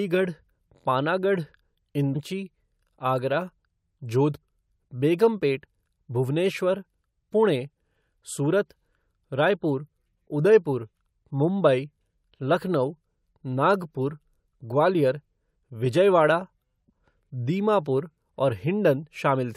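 Speech with three brief blips from damaged data in a compressed stream, at 2.14 s, 4.42–4.45 s and 16.88–16.90 s. Corrupted bytes make the decoder misread frames and lose sync until it finds the next valid header, producing a short glitch.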